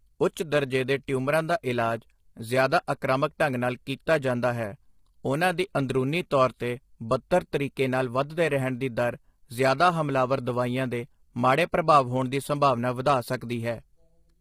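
From start to finish the speech sounds rough and grainy, with a hiss filling the gaps between harmonics and a thin, synthetic top end. That's likely low-delay AAC compression (AAC-ELD) working hard at something like 24 kbps, where its short frames can't resolve pitch harmonics cleanly.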